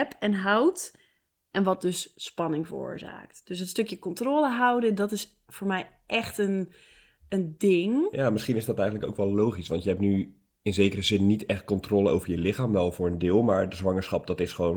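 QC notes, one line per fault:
Nothing stood out on listening to this speech.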